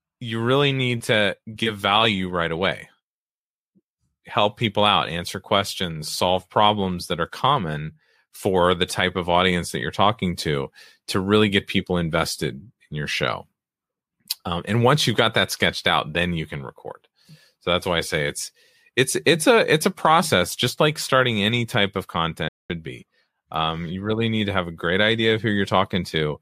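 A playback stall at 22.48 s silences the speech for about 0.21 s, likely because the player ran short of data, before it resumes.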